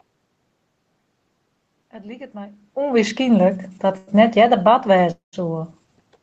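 Automatic gain rising affects this speech clip from 1.91 to 3.65 s, where the level climbs by about 4 dB over nearly two seconds. The gain control judged the input too quiet and raised its gain slowly, so the voice and the room noise swell together. That separates it from the talker's own change in distance near 2.5 s, which alters only the voice. A burst of packet loss follows at 3.97 to 4.10 s. The receiver filled about 97 ms by stretching the last sound and fading it, which produces a brief held buzz or dying hiss. When the audio resumes, about 60 ms of speech is gone, and the playout delay has grown by about 37 ms. A jitter buffer speed-up then runs from 4.14 to 4.68 s. Holding more audio than it wanted, the receiver cut out short pitch-period slices again and again, removing about 40 ms in total. The speech plays at about 106% speed with its pitch unchanged, so this half second sounds slightly hurried. 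From 5.11 to 5.36 s the sound is filled in for about 215 ms, continuing as a fading buzz or hiss that drops to near silence for about 140 ms, and then returns with about 180 ms of speech missing. This is likely a long network dropout, during which no packets arrived and the concealment ran out. Afterwards the delay sits roughly 40 ms higher.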